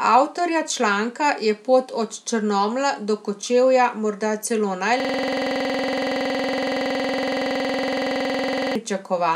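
Right after "morda celo", at 5.0 s, the audio locks into a system hang loop that runs until 8.76 s. The playback path froze while the hardware kept replaying its last buffer, so one 46 ms slice repeats exactly, roughly 80 times, at 21.5 Hz, which fits a 2048-sample buffer. It sounds like a rapid, rigid machine-gun stutter. Unlike a packet-loss repeat, it never varies or smooths over, and it holds for nearly four seconds.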